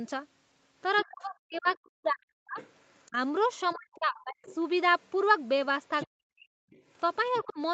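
From 0.96 s to 7.53 s, the other side's voice leaking through sits faintly under the speech, roughly 25 dB down. This is likely residual loudspeaker echo the canceller failed to remove from the microphone, heard as a second voice.

Speech suppressed in double talk overlaps it from 1.04 s to 4.39 s, with about two seconds of that span affected, then again from 6.06 s to 6.48 s, with drops of around 40 dB. A third, shallower dip of about 20 dB follows at 7.43 to 7.58 s. The likely cause is the canceller ducking everything while both ends talked, so the speech dips.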